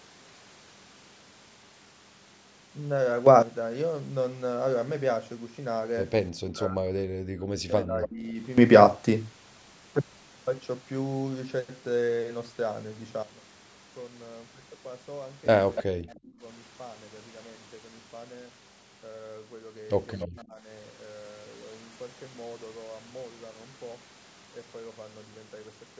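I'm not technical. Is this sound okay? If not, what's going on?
No. The speech has two recurring faults, both likely from a call's echo control handling a loudspeaker.

Speech suppressed in double talk happens from 6.48 to 8.38 s, 16.02 to 16.43 s and 20.26 to 20.67 s. While the other side talks, the voice sinks sharply or nearly vanishes, most deeply in the first stretch. The canceller mistakes it for echo and turns everything down.

An echo leak appears briefly at 8.03 to 8.08 s, 15.76 to 15.83 s and 20.19 to 20.28 s. A scrap of the voice returns 289 ms late, clearest at 15.8 s, because the loudspeaker's sound reached the microphone and was not fully removed.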